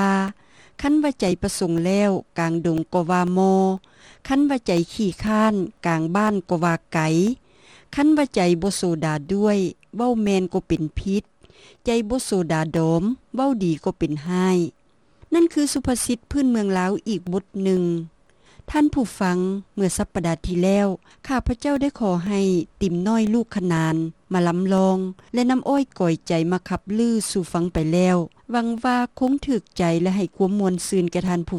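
From 0.28 s to 31.28 s the audio suffers periodic USB or driver dropouts: every 0.5 s something stalls the USB or driver path and about a millisecond of signal is replaced by silence. Around seventy of these produce a steady ticking, audible only where there is signal. A waveform shows tiny flat gaps at even spacing, and a spectrogram shows thin vertical broadband lines on a regular half-second grid.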